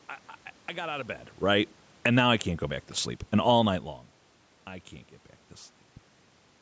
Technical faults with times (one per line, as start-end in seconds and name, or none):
none